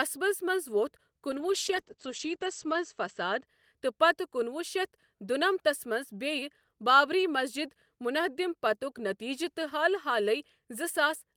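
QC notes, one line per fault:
1.32 to 3.51 s, call bitrate drop: the speech goes muffled and rough, like the top end got lopped off, then clears up again. Sounds like the call's bandwidth estimate dipped and the encoder was told to spend far fewer bits, which fits a fall from around 32 kbps to about 11 kbps. At that rate it codes coarsely and the audio band shrinks from 20 kHz to 8 kHz. It sits at its worst for roughly 1.45 s before recovering.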